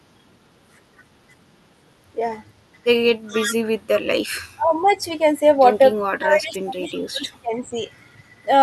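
From 3.28 to 3.54 s there is an echo leak. A faint, delayed copy of the speech comes back about 380 ms late, some 10 dB below the direct sound. It sounds like a ghostly repeat trailing the talker. The likely cause is a loudspeaker at the far end whose echo canceller let part of its microphone pickup through and sent it back.

Speech is suppressed in double talk from 4.56 to 5.01 s. The talker's level dips by around 20 dB for roughly 0.4 s. It happens again from 6.08 to 7.81 s, this time for about 1.5 s and dipping by around 25 dB. Both sides were likely speaking at once, and the echo canceller turned the talker down along with the echo.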